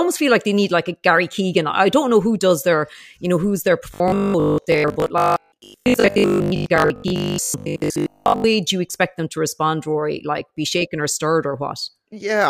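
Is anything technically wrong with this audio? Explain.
Yes. From 3.94 to 8.50 s, between "you know who's their" and "do you expect them", the speech turns into robotic sound from repeated short buffers: a rigid, metallic buzz at 50 Hz. This is likely a 20 ms chunk replayed when new audio arrived late, so most of the real sound there is skipped. Unlike dropouts, there are no silent gaps, only a steady buzz that loosely tracks the speech.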